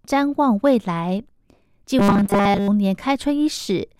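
From 1.99 s to 2.68 s the speech collapses into robotic sound from repeated short buffers: a rigid, metallic buzz pitched at 200 Hz that still loosely tracks the words. The likely cause is audio arriving too seldom, so a 5 ms fragment is replayed over and over in place of most of the real signal. On a spectrogram this shows as evenly spaced horizontal bands at multiples of 200 Hz; the waveform shows identical 5 ms cycles repeating.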